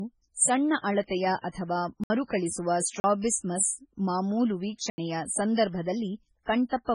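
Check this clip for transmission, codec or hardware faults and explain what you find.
Two kinds of fault are present: heavy compression damage across the whole speech clip, and four short blocks of digital silence.

Throughout, the speech has nothing above 10.5 kHz and a watery, swirling texture, with metallic chirps on s sounds and smeared consonant onsets. The likely cause is MP3 compression at a very low bitrate, in the region of 16 kbps. Starved of bits, the encoder cuts the treble at a fixed frequency and drops weak spectral lines, which flicker on and off between frames. That flickering is what separates this from a simple low-pass filter, which would dull the sound without the swirl.

Blocks of digital silence occur at 1.04 s (about 5 ms), 2.04 to 2.10 s (64 ms), 3.00 to 3.04 s (40 ms) and 4.90 to 4.98 s (80 ms). In each, the sound cuts out and returns with no fade. The 5 ms block sounds like a tick and the longer ones like short holes. 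This fits output buffers not being filled in time. The hard cuts to silence distinguish these from packet-loss concealment, which would fill the gap with smoothed or repeated sound.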